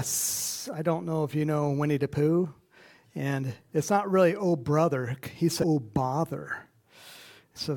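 A brief glitch breaks through the sound at about 5.62 s, and a second, equally short one at about 7.55 s, each lasting under 20 ms. Both are damaged data in a compressed stream: bytes in the encoded file were lost or overwritten at those points, so the decoder misread the affected frames, lost sync and had to hunt for the next valid frame header before clean playback resumed.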